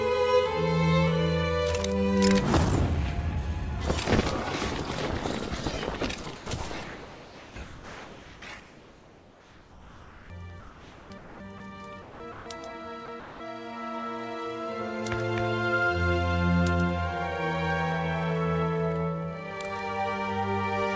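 Audio heard over a call link with nothing above 8 kHz, consistent with G.722, is chopped at 6.24–6.46, 6.84–10.30, 10.60–11.60, 12.02–12.46 and 13.06–13.40 s, likely by the sender's voice detector. Sound is swapped for comfort noise, which appears on a spectrogram as smooth, featureless noise blocks.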